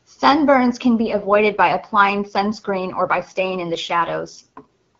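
From 1.05 s to 4.64 s there is an AMR rate drop. The speech turns rough and synthetic, with no gap and no loss of bandwidth. The AMR wideband coder spends fewer bits on the voice, which fits a drop from 23.85 to 8.85 kbit/s.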